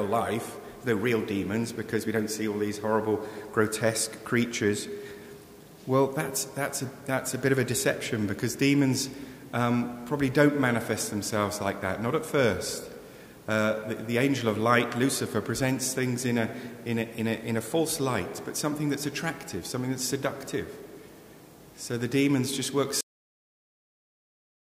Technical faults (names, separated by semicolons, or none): cut-off end